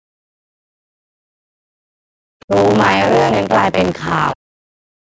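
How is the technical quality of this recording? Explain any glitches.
The recording has two distinct problems: a continuous mechanical buzz and repeated dropouts in the talker's speech. The audio also carries nothing above 8 kHz, which is consistent with call microphone processing.

Buffer tearing runs through the whole clip. The program filling the playback ring buffer and the hardware draining it have drifted out of step, so their positions cross inside every period. Roughly two fifths of each buffer still holds audio from about 30 ms earlier, joined by abrupt edges. The result is a robotic rattle at about 93.8 Hz that follows the speech, which fits a 512-sample buffer.

Speech suppressed in double talk occurs from 0.03 to 1.99 s, briefly at 2.43 to 2.53 s, and again from 4.33 s to the end. During these stretches the talker's level falls sharply, by about 40 dB at its deepest. The likely cause is an echo canceller that could not separate the local talker from the loudspeaker echo while both sides spoke, and so turned everything down.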